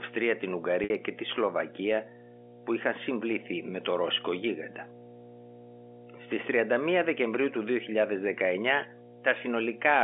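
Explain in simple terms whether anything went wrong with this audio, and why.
Two problems can be heard. Throughout the speech there is mains hum, a steady low 60 Hz drone that is nearly as loud as the talking. It comes from the power line leaking into the signal, most often through a ground loop or a nearby transformer.

At 0.84 to 0.90 s, about 60 ms of audio went missing. This is packet loss with pitch repetition. The receiver filled the gap by repeating the last stretch of voice, so the sound briefly holds with a buzzy quality. The gap length fits about three lost packets. The narrow telephone-band sound is simply the G.711 line coding at work.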